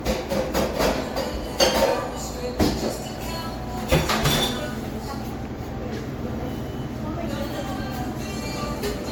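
Throughout the clip, the audio sounds swirly, smeared and hollow, and attacks blur. Nothing is heard above 19.9 kHz. This is generation loss, likely from around seven rounds of MP3 encoding, each on a shifted frame grid, which fits 96 kbit/s.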